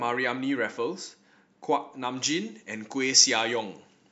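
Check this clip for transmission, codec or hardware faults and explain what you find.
One fault is present: pre-emphasis left on, from 2.17 s to the end of the speech. The treble lift of a 75 µs FM pre-emphasis curve was never undone by de-emphasis, so 10 kHz sits about 13 dB too high relative to 1 kHz, leaving the sound thin, bright and harshly sibilant.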